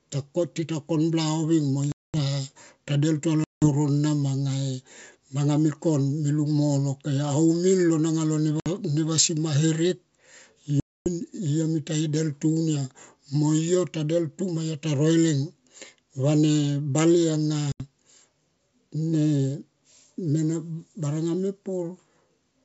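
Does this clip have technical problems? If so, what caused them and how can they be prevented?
Yes. Packet loss on an ADPCM call leaves hard-edged silent holes at 1.92–2.17, 3.44–3.69, 8.60–8.68, 10.80–11.07 and 17.72–17.82 s. Afterwards the decoder's predictor and step size no longer match the sender's. So speech returns slightly distorted, then settles. Loss concealment, redundancy or FEC, and resetting decoder state after gaps would prevent this.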